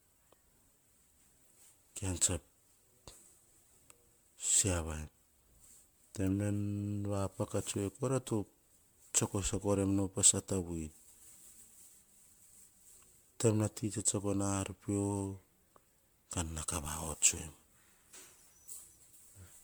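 Generation loss runs through the whole of this speech clip, with nothing above 19.9 kHz. The sound is swirly, smeared and hollow, with blurred attacks, more damaged than a single pass at a 128 kbit/s MP3-like rate would leave. The likely cause is repeated lossy re-encoding, around ten passes, each quantising the audio afresh on a shifted frame grid, so noise and spectral holes pile up from one generation to the next.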